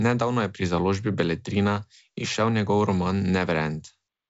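No technical faults can be heard in this speech, which comes through G.722 wideband telephone coding at 64 kbit/s with nothing above about 7.7 kHz.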